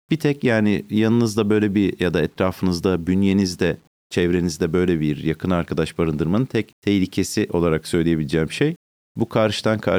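From start to finish the speech has a grainy, gritty edge that shifts with the voice, worst in the quiet tails, with the error sitting roughly 40 dB down. That points to low bit depth without dither, likely around 9 bits simply rounded.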